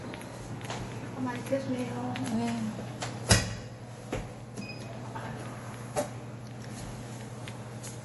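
Throughout the clip the sound has a watery, swirling quality, with nothing above 11.5 kHz. This is likely MP3 compression at a low bitrate, around 48 kbps: the encoder cut the treble at a fixed point and let weak frequency lines drop in and out between frames.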